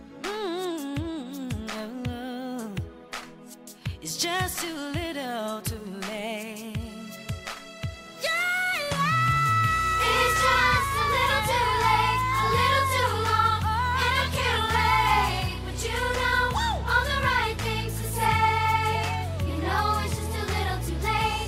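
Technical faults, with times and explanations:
No technical faults detected.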